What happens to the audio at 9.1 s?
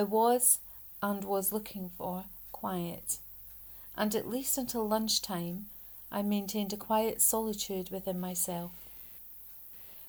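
At 9.1 s the audio is inside a stretch of computer activity noise running from 8.17 s to the end of the clip. Shifting load in the machine's processor, graphics or mouse circuitry is disturbing the ground shared with the audio path, so that electrical interference leaks into the signal. It comes through as a buzzy, scratchy pulsing at roughly 100 pulses per second, sitting around 30 dB below the sound. It tracks the computer's activity rather than anything in the audio itself.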